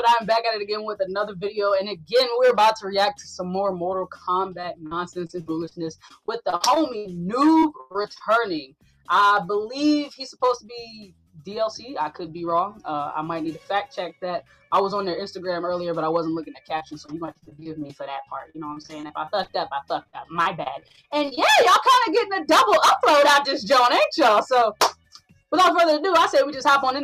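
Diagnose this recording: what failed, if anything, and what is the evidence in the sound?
The network stage failed with repeated packet loss, giving a robotic sound in two clusters: 4.61–5.75 s, 6.08–7.15 s and 7.61–8.22 s, then 16.78–18.04 s, 18.50–19.55 s and 20.03–21.39 s. Each stretch is choppy, with short holes patched by extending the last sound before the next hole arrives. Most holes are brief, but one reaches 100 ms near 7.6 s, where roughly a third of that span is concealment rather than real audio.

The call-processing stage also acted on the signal, with sound cut by the noise suppressor at 8.67–9.08 s, 11.07–11.41 s and 24.95–25.42 s. In each window the level sinks by up to about 12 dB at 8.67 s and 11.07 s and about 10 dB at 24.95 s, for a few hundred milliseconds at a time. The suppressor classified this material as noise and attenuated it harder than the surrounding audio, so those passages drop out of level.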